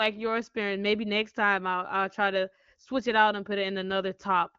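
No faults to report; the speech runs over an AMR wideband (HD Voice) link at 15.85 kbit/s and nothing in it calls for a finding.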